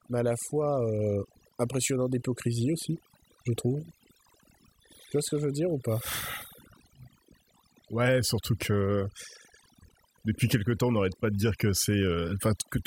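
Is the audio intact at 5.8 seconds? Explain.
No. At 5.8 seconds, as across the whole clip, overdone noise removal is present. The noise reduction was set too strong, so it cuts individual frequency bands near its noise estimate, taking quiet parts of the speech with them. The background drops and breaks up into twinkling specks. On a spectrogram this shows as isolated scattered dots in an otherwise empty background and a patchy, hollowed-out voice trace.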